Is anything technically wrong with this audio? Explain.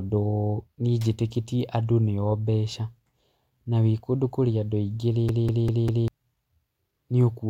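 Yes, there is one fault. A CD stuck on one turn runs from 5.29 s to 6.08 s, starting just after "kũrĩ andũ aingĩ rĩ". A scratch sends the laser back one track at the same point on every rotation, so the same 198 ms slice of speech plays four times in a row, with a brief mute at each jump back. It is heard as a rapid, evenly spaced stutter, the familiar sound of a skipping CD.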